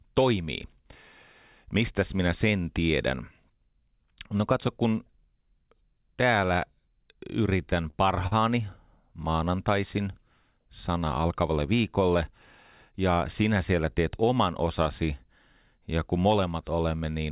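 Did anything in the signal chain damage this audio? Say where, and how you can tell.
Yes. Between 7.65 and 8.33 s the jitter buffer on the call's network path ran dry four times, producing repeated stalls (stutter). Each gap, the longest 44 ms, was filled by continuing the previous sound, about 103 ms in all and roughly 15% of that span. Nothing is lost, but the speech catches and drags.

At 12.90 to 13.18 s, just before "sinä siellä teet oman", there is a jitter buffer speed-up. The buffer was holding too much audio, so it cut several pitch-period slices, around 40 ms in total. The speech runs at 110% speed with unchanged pitch and sounds briefly hurried. Throughout the clip the call path's codec leaves nothing above 4 kHz, which fits G.711 mu-law.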